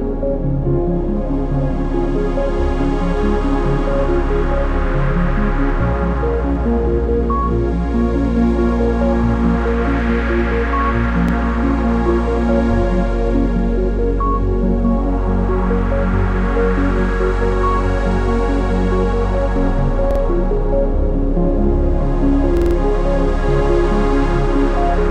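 A recording of everyday sounds with three stutters from a repeated buffer, where playback ran dry and the device replayed its last chunk. Each chunk is about 46 ms, which fits a 2048-sample buffer. At 11.29 to 11.33 s one slice plays twice, at 20.11 to 20.20 s three times, and at 22.57 to 22.76 s five times, each with a hard join. Nothing seems to go missing, so the sound just picks up slightly late.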